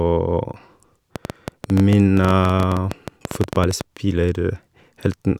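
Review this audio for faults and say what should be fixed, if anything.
A train of clicks ticks and pops over the speech from 1.16 to 3.82 s, about 11.3 clicks per second at an uneven pace, some thirty in all, each much the same shape and peaking around 10 dB above the speech. The likely cause is interference from nearby equipment or a faulty connection or power supply injecting repeated pulses into the signal path. Prevent it by shielding and separating cables from electrical gear and checking the interface's connection and drivers.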